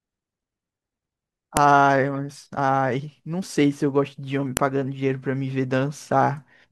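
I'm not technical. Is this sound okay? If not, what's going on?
No. There are two sharp clicks, at 1.57 s and 4.57 s. This is a file header played as audio. The speech was joined from pieces about 3 seconds long, and each piece's header data was played as sound, making a snap.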